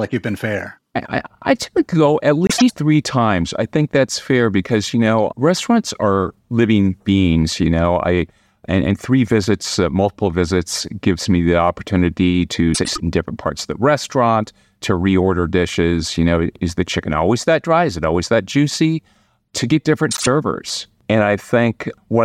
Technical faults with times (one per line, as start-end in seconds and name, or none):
2.47-2.74 frames out of order
12.74-13.00 frames out of order
20.11-20.27 frames out of order